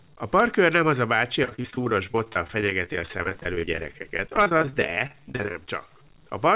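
A speech recording carried over a telephone-band call path, with nothing above 4 kHz, shows two faults. Throughout, a grainy low bit depth without dither distortion tracks the voice and fades with it, unlike steady hiss, sitting roughly 35 dB down, which likely points to 8-bit truncation. From 1.43 to 5.59 s, right after "nem az a bácsi", repeated packet loss makes the speech choppy and robotic. Dozens of short holes, the longest 36 ms, are patched by stretching the preceding sound across about 30% of that span.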